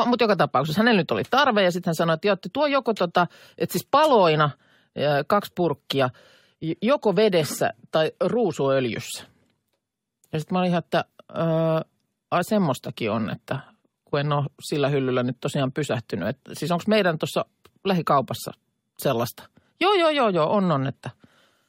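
No technical faults can be heard anywhere in this speech recording. There is no moment in the audio that needs a timestamp or a closer listen.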